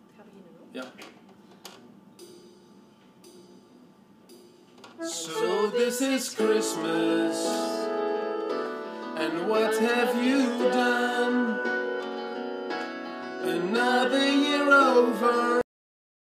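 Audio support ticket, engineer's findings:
Cut-off end at 15.61 s: sound stops mid-event and drops straight to digital silence with no decay. Unlike a fade-out or natural ending, nothing tapers. Probable component: output writer or playback buffer. Final buffers never flushed before close.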